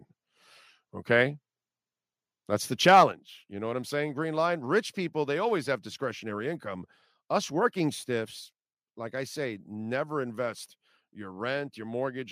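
From 2.88 to 3.04 s, the speech shows microphone overload. The loudest peaks are driven about 4 dB past the converter's ceiling, so their tops are sheared flat. Only a small fraction of samples, around one in twenty, is affected. Yet those flattened crests add a harsh, crackling edge to the syllables here. The likely cause is an input volume set too high for how loudly the talker spoke.

At 3.12 s, the microphone volume steps down. The whole level drops abruptly by about 6 dB. Voice and background fall together, with no gradual fade. The drop lands just after the distorted burst. That timing points to the likely cause: the call software sensing the clipping and cutting the device's input gain in one move. The result is an audible dip in loudness that stays down afterwards.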